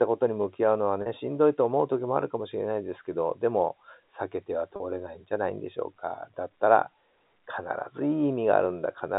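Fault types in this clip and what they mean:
packet loss with pitch repetition: Audio packets failed to arrive, and the receiver filled each gap by repeating the last pitch period. At 1.02 s and 4.76 s, 40 ms goes missing, which fits two 20 ms packets, heard as a brief held, buzzy tone.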